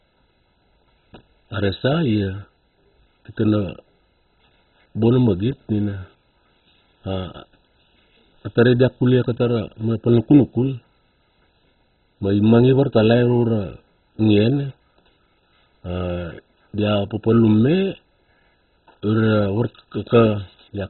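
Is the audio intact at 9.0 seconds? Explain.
No. At 9.0 seconds the speech is damaged, as it is throughout the clip. Nothing survives above about 4.1 kHz, so it sounds dull and muffled. A gurgling, granular roughness sits on top. The likely cause is MP2 compression. The codec splits the signal into 32 sub-bands and shares out too few bits. Upper bands are switched off and the rest are coarsely quantised. The heavy damage points to a very low bitrate, around 16 kbps.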